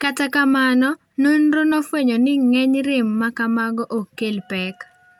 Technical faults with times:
none

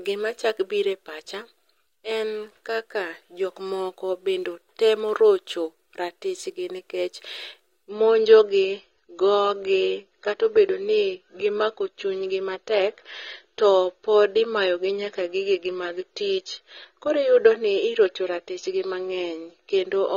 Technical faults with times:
7.89-20.17 adaptive stream at a lower bitrate

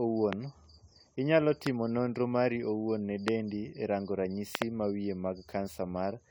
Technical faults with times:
0.00-6.30 generation loss
0.33-0.35 loud pop
1.67-1.69 loud pop
3.28-3.30 loud pop
4.55-4.64 loud pop

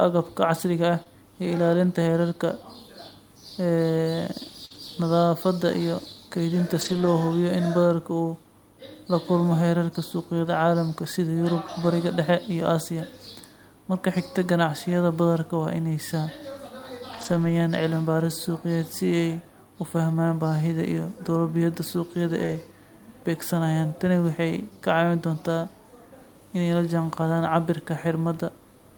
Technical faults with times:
1.03-1.07 short concealed packet loss
4.65-4.72 burst of packet loss
4.70-4.76 lost packet rebuilt from error correction
6.81-7.07 lost packet rebuilt from error correction
10.45 lost packet rebuilt from error correction
17.13-17.51 lost packet rebuilt from error correction
22.43-22.57 lost packet rebuilt from error correction

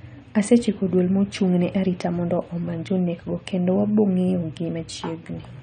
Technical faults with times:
0.00-5.62 AAC compression

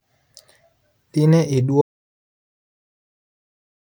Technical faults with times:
1.81-3.91 audio dropout to silence

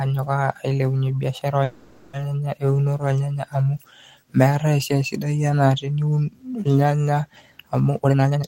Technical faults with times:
1.63-2.15 call audio freeze
7.88-8.48 jitter buffer speed-up

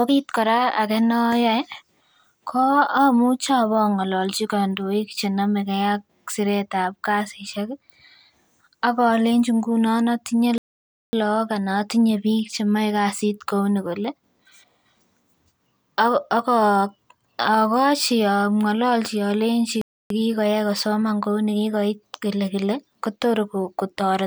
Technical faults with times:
10.58-11.13 playback stall
19.81-20.10 playback stall

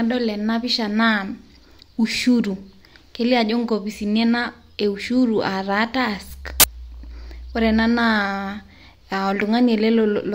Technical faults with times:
6.60-6.64 file tags played as audio

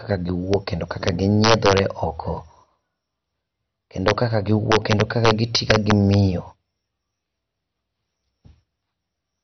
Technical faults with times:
0.00-9.43 MP2 compression
0.54 integer overflow
1.08 integer overflow
1.44-1.79 integer overflow
4.08-4.11 integer overflow
4.72-6.14 integer overflow

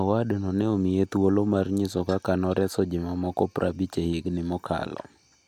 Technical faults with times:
none

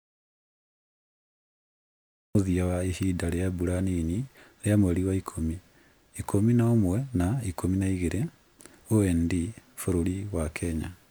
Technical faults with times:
0.00-2.35 audio dropout to silence

